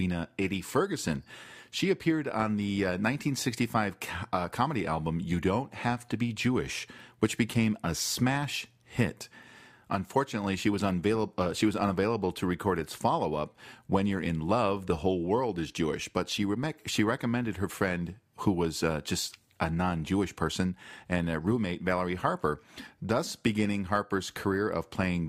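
No audible technical faults.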